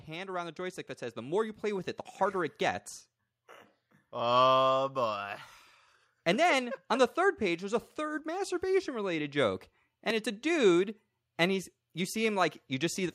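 From 0.05 to 2.9 s the automatic gain rising is audible: the gain control judged the input too quiet and lifted it by about 8 dB. Unlike a talker simply speaking up, the background noise swells together with the speech.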